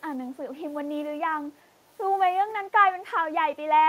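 Speech clip with a brief echo leak from 1.56 to 1.61 s. A very faint copy of the speech returns 377 ms late, likely because the far end's echo canceller did not fully remove its loudspeaker pickup. It is a separate delayed copy rather than a room-reverb smear.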